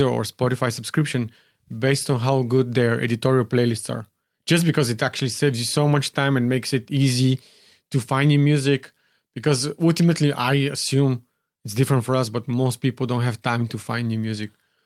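Speech whose tempo feels faintly unsteady, with small hiccups recurring at uneven intervals, comes from clock drift between sender and receiver: the sender's clock runs roughly 3% slow, so the jitter buffer keeps draining. From 0.45 s to 14.29 s, repeated timing corrections keep duplicating short pieces to fill the gap, slowing playback to 97% and adding roughly 400 ms overall.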